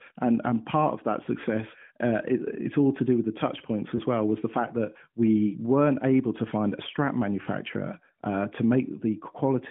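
Lost AMR speech frames at 1.24 to 1.28 s and again at 3.96 to 4.01 s. Each time, a frame failed its check, and the decoder filled the gap by repeating the previous pitch and vocal tract settings at lower gain. The result is a short dip or warble in the narrowband mobile sound, a length that fits a single 20 ms frame.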